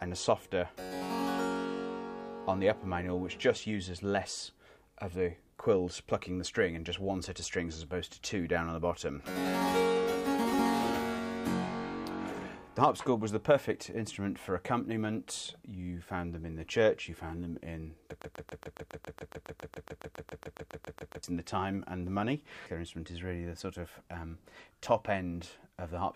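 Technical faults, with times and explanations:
18.22–21.23 s, broken-record loop: the player or stream likely stalled and kept resending the last fragment it held, so a 138 ms slice repeats exactly, back to back, 22 times over about 3 seconds, and the audio belonging to that stretch never plays.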